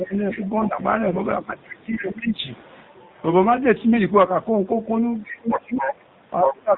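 Throughout, the speech has the AMR narrowband mobile codec sound: nothing above 4 kHz and a buzzy, synthetic edge on the voice. The damage is plainly audible and fits the low 7.4 kbps mode, where few pulses drive the vocal-tract model. This steady band-limited coarseness is the codec itself, unlike the brief hoarse burst that comes later.

From 0.31 to 0.69 s a second voice sits underneath, about 15 dB below the main talker. This is the other side's voice leaking through, likely because the echo canceller left some of the far end's loudspeaker output in the microphone. It is a distinct extra voice, not a distortion of the talker's own.

From 1.08 to 1.23 s come AMR bit errors. Flipped bits in the weakly protected part of each frame, at an error rate around 5 percent, misplace the excitation pulses and skew gain and spectral detail. The voice keeps roughly its pitch and level but turns gargly and scratchy. 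That is a local roughness on the talker, not an added voice or a drop in level.

From 1.42 to 2.43 s the talker's speech is suppressed in double talk. It sinks by as much as about 20 dB, likely because the canceller turned everything down while both sides spoke. A faint leak of the other side, about 20 dB down, sits inside this stretch at 2.0 to 2.12 s.

The pattern returns more strongly near the end. The other side leaks in from 5.24 to 5.94 s at only about 5 dB below the talker. Suppression starts at 5.26 s and runs to the end, dipping by up to about 25 dB. From 6.45 s to the end the leaked voice is about as loud as the talker. In suppression the talker fades or breaks up, whereas leakage adds a second voice on top.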